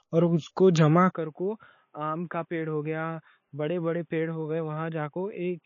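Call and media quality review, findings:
MP3 compression throughout: nothing above 7.1 kHz, watery, swirly texture and smeared attacks on speech, plainly audible. Likely cause is low-bitrate MP3, around 28 kbps by the sound, where the encoder cuts treble and drops weak spectral lines frame to frame.

Input switched to a poorer device at 1.13 s, right after "اور اس کو جمع", lasting to the end: band narrows to nothing above 3.7 kHz, sound turns dull and boxy, level drops by roughly 10 dB, faint new noise floor about 45 dB below speech, no gap at the switch. Likely a change to a lower-grade microphone or a headset call profile.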